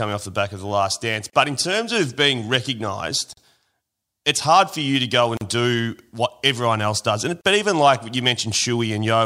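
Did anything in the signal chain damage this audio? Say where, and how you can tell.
Yes. Brief silences of 32 to 40 ms cut into the speech every 2 s, at 1.3, 3.33 (after "terms of being recognised"), 5.37 and 7.41 s. This is a gap at a join of encoded pieces: the segments were encoded separately and joined with each encoder's start delay and final-frame padding left untrimmed.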